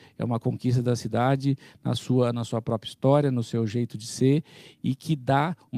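Clock drift between sender and receiver runs through the whole clip. The sender's clock is running about 3% slow against the receiver's, so the jitter buffer keeps draining. Unlike random network jitter, the timing error always pushes the same way, producing small timing hiccups that recur at uneven intervals.

From 0.32 s to the end come repeated timing corrections. The receiver keeps stretching the speech with small repeated slivers, playing it at about 97% speed and adding roughly 150 ms overall. These are slight, unevenly spaced hiccups and a faintly dragging tempo, not the clean dropouts of packet loss.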